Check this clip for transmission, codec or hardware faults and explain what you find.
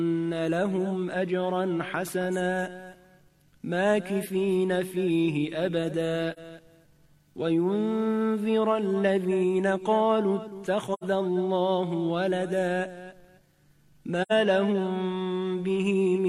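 Three short dropouts are present, all from AAC frame loss with muting, at 6.33 to 6.39 s, 10.93 to 11.04 s and 14.22 to 14.32 s. The decoder lost compressed frames and zeroed their spectrum. The first gap, about 43 ms, sounds like one missing frame. The later two, about 85 ms each, point to two consecutive frames. Because the overlapping windows blend in and out of the silence, the first gap sounds like a brief dip and the later two like soft-edged holes in the audio rather than sharp cuts.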